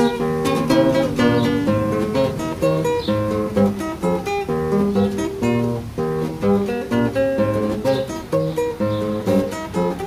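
No technical faults are audible.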